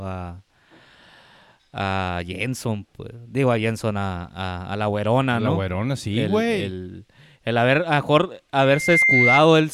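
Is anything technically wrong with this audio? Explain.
Yes. From 8.62 s to 9.41 s there is loudspeaker feedback squeal. The microphone is picking up the loudspeaker it drives, and at 2.1 kHz the gain around that loop exceeds one, so the tone feeds itself. It swells over roughly 0.4 s into a piercing whistle a few decibels louder than the speech. A steady interference tone would be present at full level from the start. This one grows out of the sound itself and keeps rising until the amplifier limits it or the loop is broken.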